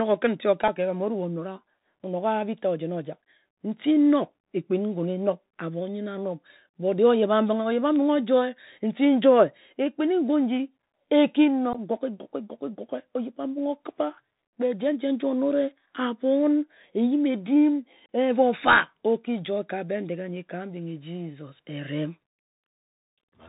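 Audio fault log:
throughout: Bluetooth CVSD headset codec. Narrowband, scratchy s sounds and a granular hiss; a one-bit 64 kHz delta coder passes nothing above 4 kHz, fitting a 64 kbps link.
0.68, 11.73–11.75, 18.06–18.09: unconcealed Bluetooth headset packet loss. Abrupt holes of 3.8, 15 and 30 ms; the first falls just before "ka ebham". Lost packets, from one to several, were replaced by silence or an idle pattern.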